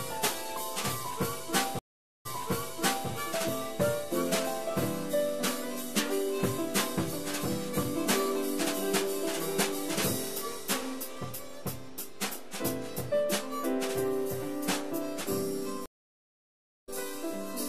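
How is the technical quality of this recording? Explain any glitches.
The recording has two stream reconnects and a DC offset that runs through the whole clip.

The DC offset is present from start to finish. The entire waveform sits shifted away from zero by a constant amount. You cannot hear it as such. It wastes headroom, though, and it appears as steady energy at the very bottom of the spectrum. A high-pass filter or DC removal would centre the waveform again.

The first stream reconnect runs from 1.79 to 3.09 s. The connection dropped, and the player went silent for 460 ms. It then reconnected and started a fresh decoder mid-stream. Playback resumes 0.84 s earlier than where it broke off, so a stretch of sound repeats. That fits a server resending a burst. The second reconnect runs from 15.86 to 16.90 s. The silence lasts 1.02 s. This time playback picks up roughly 0.7 s later, so material is skipped. 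In both cases the restart fades in as the new decoder settles.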